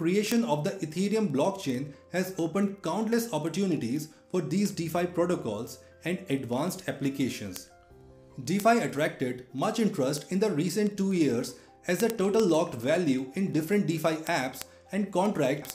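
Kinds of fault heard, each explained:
Word clock ticks: the receiving device runs on its own clock, unlocked from the sender's. Roughly every 50 ms the clocks slip one sample, leaving a sharp tick. About twenty ticks per second from 0.12 s onward fit a mismatch near 500 ppm.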